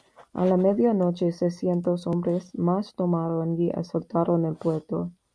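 No technical faults can be heard anywhere in the recording.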